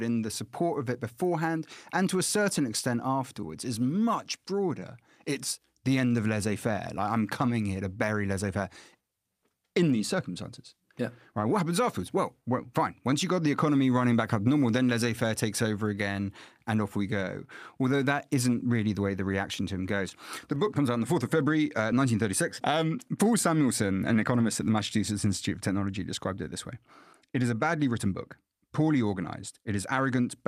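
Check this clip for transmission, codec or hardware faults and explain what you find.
The clip shows two related faults, both in the timing of the transmission path.

Clock drift between sender and receiver runs through the whole clip. The sender's audio clock runs about 3% slow against the receiver's. Audio arrives slightly slower than it is played out, so the jitter buffer keeps draining. The receiver must fill the gap. The result is a faint, uneven instability in timing rather than any change in tone.

Repeated timing corrections appear from 0.12 s to 30.22 s. The receiver keeps repeating short pieces of audio to cover the shortfall. All the edits push the same way, stretching the audio, and they come at irregular intervals. In total they add about a second, and the speech plays at about 97% of its proper rate. Each repeat is small. They come across as slight hiccups and a tempo that drags and wavers.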